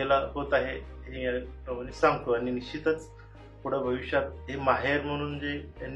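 Damaged data in a compressed stream hits at 1.12 to 1.17 s. Corrupted bytes in the encoded frames there are misread by the decoder, which loses sync and hunts for the next valid frame header, leaving a short glitch of about 56 ms in the sound.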